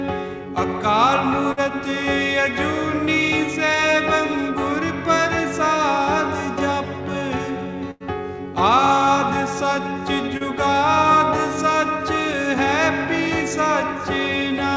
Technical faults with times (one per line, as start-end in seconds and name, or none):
1.52-1.68 burst of packet loss
7.91-8.03 burst of packet loss
10.37-10.43 short concealed packet loss